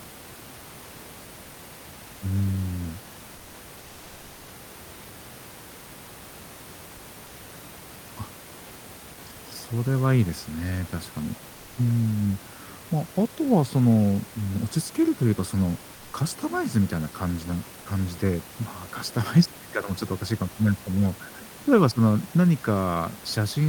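It's a speech clip, and in two short pauses the real room background drops out and gets replaced by comfort noise: 3.37 to 3.53 s (160 ms) and 15.95 to 16.13 s (180 ms). The room noise, sitting about 23 dB under the speech, loses its texture there and turns into a flat, featureless hiss about 1 dB quieter. That's likely discontinuous transmission in the sender's codec, with the receiver filling the gap with synthetic noise, and it fits Opus DTX.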